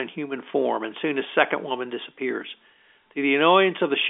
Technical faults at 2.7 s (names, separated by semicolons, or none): none